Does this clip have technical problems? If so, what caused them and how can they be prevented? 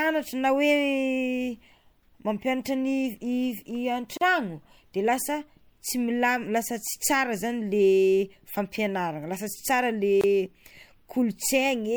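Yes. Speech briefly drops into silence at 4.17 to 4.21 s (40 ms) and 10.21 to 10.24 s (24 ms). These are gaps at joins of encoded pieces, where encoder delay and final-frame padding were left untrimmed. Prevent this by encoding as one continuous stream or trimming each piece's delay and padding before joining.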